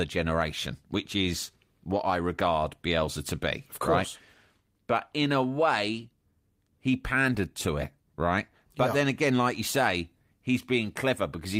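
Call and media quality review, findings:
No faults found; no audible defects in the speech.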